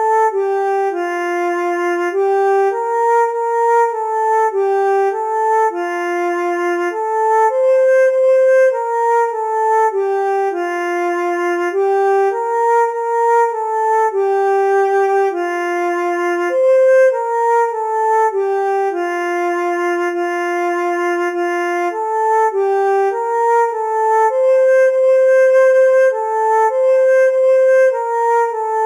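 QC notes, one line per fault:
Throughout: imaging from linear upsampling. The top of the band sounds dulled, and a faint metallic shimmer rides on the brightest, sharpest sounds. The rate was raised by joining samples with straight lines. That is a weak filter. It softens the highest frequencies and leaves a mirrored copy of the spectrum from 4 to 8 kHz, roughly 35 dB below the signal. The pattern fits audio raised from an 8 kHz rate to 48 kHz.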